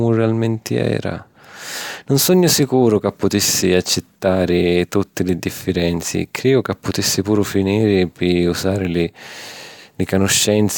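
No technical faults are audible.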